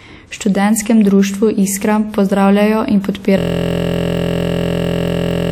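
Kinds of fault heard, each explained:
System hang loop: the stalled system replays one 23.2 ms buffer after "pozdravljajo in", a 43.1 Hz buzz; identical waveform cycles, evenly spaced spectrogram lines.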